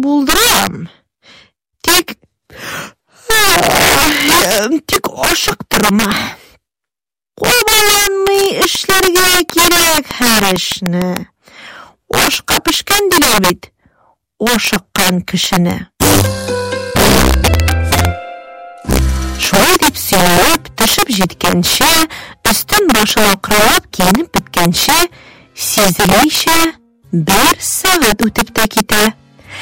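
Throughout the clip, the level is pushed about 11 dB past the integer limit, and instead of being held there the samples wrap to the opposite sign. A small share of the audio, around 7 percent, overruns, so loud moments break into violent cracks far harsher than clipping: the integer overflow signature.

From 8.75 to 11.18 s, a train of clicks is likely caused by interference or a faulty connection injecting pulses. About fifteen near-identical ticks arrive at a regular 6.6 per second, peaking about 15 dB above the surrounding sound and audible even in quieter gaps.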